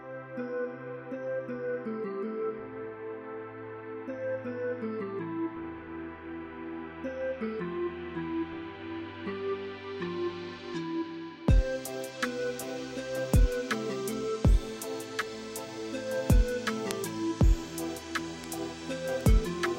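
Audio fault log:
16.91, 18.44 and 19.21 s, bit error spike: flipped bits jump one to three samples, to about -8 then -20 dBFS, giving isolated broadband ticks unrelated to the surrounding sound, unlike edit clicks.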